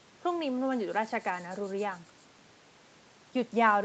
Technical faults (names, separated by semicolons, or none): none